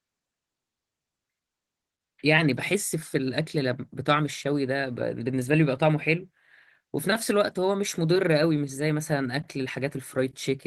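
Nothing stood out as a technical fault when listening through this speech recording.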